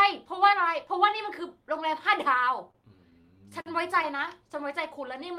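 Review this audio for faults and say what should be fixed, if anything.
Repeated stalls (stutter) run from 2.71 to 4.29 s: ten times the jitter buffer ran dry as packets arrived late, and the receiver stretched the last sound to cover 176 ms in total, about 11% of that stretch, with the longest gap 49 ms. Unlike packet loss, nothing is cut out; the speech halts and drags instead. Preventing it means fixing the late or slow delivery on the network path, or giving the buffer more headroom.

A jitter buffer slow-down covers 4.68 to 5.38 s. To rebuild its reserve, the receiver repeated single pitch periods or bits of pauses, adding 47 ms and playing the speech at 94% speed with the pitch unchanged. This differs from the stutter before it because it is a smooth, even stretch rather than halting breaks. A steadier packet flow would keep the buffer from running low and needing this.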